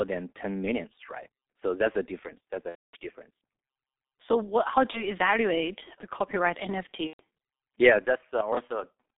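From the start, the whole speech track carries the G.723.1 codec at heavy damage, running at 6.3 kbit/s inside a 200 Hz to 3.7 kHz telephone band. The voice is muffled and hoarse, and the consonants smear together, because the coder rebuilds speech from a coarse model refreshed only every 30 ms. On a spectrogram the energy stops sharply at 3.7 kHz with empty space above, formants look blurred, and fricatives are faint grey smudges rather than crisp bursts.

VoIP packet loss concealed by the speech codec first appears from 2.69 to 2.97 s, a gap of about 240 ms, which fits eight consecutive lost frames. The decoder repeats its last pitch and filter, so the sound stretches and fades, then goes mute from the third lost frame on. A shorter loss of about 30 ms, one frame's worth, follows from 4.91 to 5.04 s, just before "evaluate the copyright". The third, about 120 ms, runs from 7.07 to 7.20 s, right after "evaluate the copyright". 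On a spectrogram these show as stretched, fading stretches of sound, while the waveform envelope decays smoothly, and the speech stays weak for a moment after each gap.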